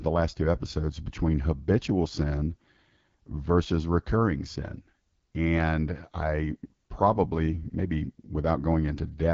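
From start to finish the speech carries AMR wideband (HD Voice) codec damage, plainly audible as a rough, raspy texture, which fits AMR-WB at 8.85 kbit/s, one of its lowest rates. The pulse-based model strains here, and nothing sounds above about 7.5 kHz.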